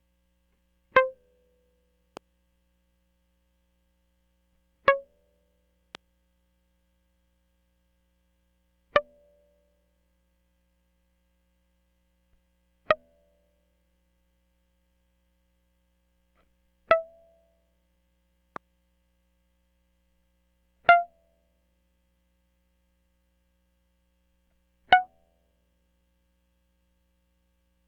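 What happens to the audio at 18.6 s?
At 18.56 s a single loud pop cuts through the music. It lasts only about 20 ms, ending by 18.58 s. The pop stands far above the surrounding level, somewhere around 15 dB louder. It sounds like a sharp, isolated crack. The music carries on beneath it without a break. The likely cause is a sudden voltage spike, perhaps from static, a switch or a driver glitch, added on top of the signal and shaped by the circuits that follow.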